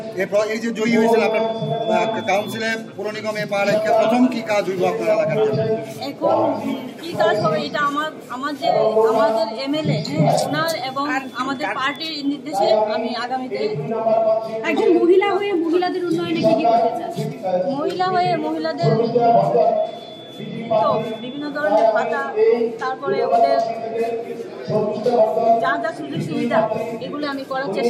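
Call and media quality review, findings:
Bit error spikes: single sharp broadband ticks at 3.43 s (three samples, about −21 dBFS) and 11.96 s (one sample, about −15 dBFS). Flipped bit in memory or digital link; unlike a dropout click, no gap follows.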